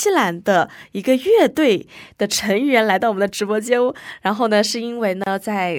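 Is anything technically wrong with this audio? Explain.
Yes. At 5.24 s the sound drops out into a short gap of 28 ms, its edges smeared so the silent part is shorter, and then resumes exactly where it left off. This is a gap at a join of encoded pieces. The audio was encoded in separate chunks, which fits pieces about 6 s long, and joined without trimming. The encoder's start-up delay and the padding of each piece's final frame were left in, leaving this hole in otherwise continuous sound.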